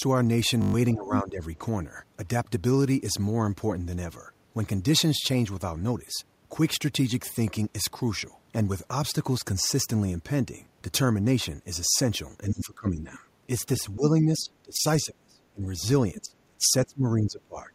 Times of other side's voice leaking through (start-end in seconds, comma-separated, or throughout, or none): 13.13-13.19, 16.16-16.20